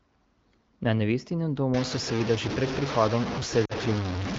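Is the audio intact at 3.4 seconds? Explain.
No. From 1.74 s to the end, the speech sounds harsh and grainy, with distortion almost as loud as the speech itself; the likely cause is low bit depth without dither, truncated to about 4 bits.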